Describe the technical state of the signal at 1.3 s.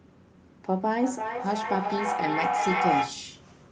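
At 1.3 s the signal is inside a stretch of feedback echo between two devices, running from 0.68 to 3.36 s. A second device in the room replays the call audio, and the first microphone picks it up again. Its echo canceller removes only its own playback, so the sound recirculates about every 300 ms. The loop gain is high, with repeats reaching about 1 dB above the direct speech. They build into a thin, ringing pile-up inside a band that stops near 12 kHz.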